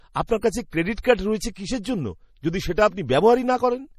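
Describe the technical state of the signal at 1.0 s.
Right around 1.0 s you're sitting between two bursts of pre-echo. One smears from 0.94 to 0.98 s, about 35 ms, and a shorter one lands at 1.02 s, roughly 18 ms. In both, an attack lands late in a transform block, so the quantisation noise budgeted for the loud part spreads back into the quiet gap before it. You hear a brief hiss creeping in ahead of each onset, and the attacks come out soft and blurred rather than crisp.

Underneath all of that is MP3 compression, likely the cause of the general damage, and it's plainly audible here. The top end is simply gone above 14.8 kHz, where the encoder lopped off the treble. With bits this scarce, which fits a low rate around 40 kbps, weak frequency lines get zeroed and flicker on and off between frames. That gives the speech a watery, swirly texture, with metallic chirps on sibilants.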